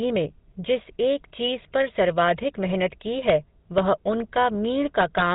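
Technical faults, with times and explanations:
Throughout, GSM full-rate codec: the whole clip has that gritty, buzzy edge you get when a vocal-tract model is fed by a coarse, evenly spaced pulse train instead of the real excitation, with only a fraction of the detail kept. The damage is plainly audible, a rasp sitting on every voiced stretch, and nothing comes through above about 3.8 kHz, so the top end sounds dull and boxed in. The character fits a 13 kbps GSM full-rate stream.
3.78 s and 5.01 to 5.22 s, integer overflow: twice the signal runs past the largest value the integer format can hold. Instead of being clamped, it wraps around to the opposite extreme. The first event is a single sharp crack, overshooting by only about 1 dB. The second runs about 0.2 s, overshooting by about 2 dB, and each peak that crosses the limit jumps across the full range. That's why these sound like violent snaps rather than the softer fuzz of ordinary clipping.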